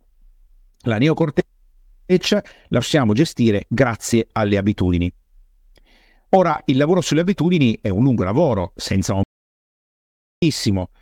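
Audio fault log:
9.23 to 10.42 s, audio dropout to silence: the speech stops abruptly in mid-flow and the next 1.19 s is silent, with no room tone or background hiss at all, before the speech resumes just as suddenly. The input was likely lost for that stretch through a disconnection, link failure or momentary mute while the recorder kept writing silence, so whatever was spoken in that gap is simply missing.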